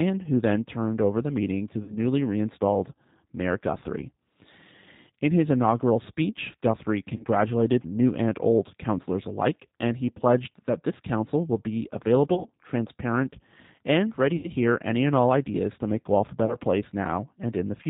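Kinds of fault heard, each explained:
G.729 codec: Speech sounds rough and slightly synthetic, with nothing above 4 kHz, which fits a low-bitrate codec rebuilding it from a vocal tract filter and pitch model.
VoIP packet loss concealed by the speech codec: Five short buzzy or noisy, fading smears from 1.83 to 16.57 s, where the decoder filled 30 to 80 ms of lost packets from its last pitch and filter.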